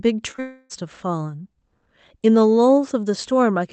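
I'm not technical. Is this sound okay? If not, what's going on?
No. Around 0.31 to 0.40 seconds there are two back-to-back brief glitches, at 0.31 to 0.36 and 0.36 to 0.40 seconds. These are short concealed packet loss: tiny pieces of the call arrived too late, and the receiver patched each gap by stretching the previous sound, leaving a quick smear or wobble rather than a real break.

Straight after, from 0.40 to 0.82 seconds, the sound turns into a stretched-out buzzy or hissy continuation that fades. The audio then resumes with a sliver missing. This is likely a long network dropout, where the connection stalled for a moment. It differs from the earlier glitches by lasting much longer, close to half a second, and you can hear the filler sound taking over.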